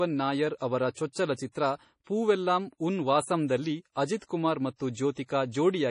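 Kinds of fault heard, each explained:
MP3 compression: The speech has nothing above 10.5 kHz, a hard treble ceiling that, together with heavy watery, swirling artefacts throughout, is likely the work of an MP3 encoder starved of bits, which fits a low bitrate around 32 kbps. To save data, the encoder truncates the top band and discards weaker frequency lines, and those lines flicker in and out between frames. That flicker produces the swirl, while sibilants and consonant onsets come out smeared and metallic.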